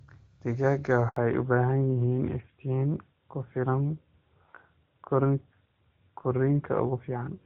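At 1.08 s the speech falls silent for 80 ms, until 1.16 s, fading out quickly rather than stopping cleanly. This is a handover gap: the call was passed between networks and no speech frames arrived during the switch, so whatever was said in that moment is lost.

From 1.16 s to the end the speech sounds duller and rougher, with nothing above 4 kHz. This is a fallback to narrowband: after the handover the call left the clear HD Voice path, which fits AMR-WB at 23.85 kbit/s, for an older narrowband codec consistent with AMR-NB at 12.2 kbit/s.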